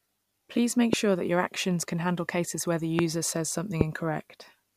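A loud pop cuts into the speech three times: at 0.93 to 0.96 s, 2.99 to 3.01 s and 3.81 to 3.83 s. Each is a single sharp pop lasting a couple of hundredths of a second and peaking roughly 20 dB above the speech, which carries on beneath it. The likely cause is a brief voltage step or pulse, from a connector, switch, static discharge or driver glitch, entering the signal chain and being shaped by the circuitry downstream.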